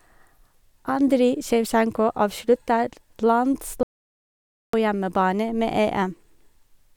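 Speech with one audio dropout to silence, running from 3.83 s to 4.73 s, so roughly 0.9 s of the recording is simply missing. The sound cuts off abruptly mid-flow and resumes just as suddenly, and the gap is silent with no room tone at all. That distinguishes it from a natural pause or a noise gate, which would leave background hiss or decaying tails. The likely cause is a brief loss of the input signal, such as a disconnect or stray mute, while recording continued.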